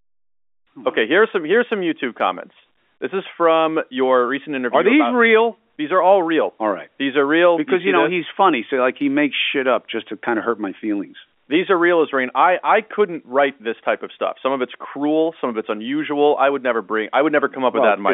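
No technical faults are audible.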